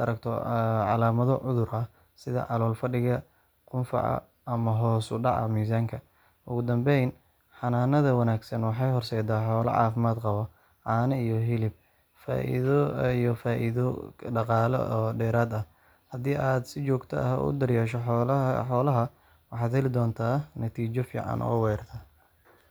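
Speech recording with no technical faults detected anywhere in it.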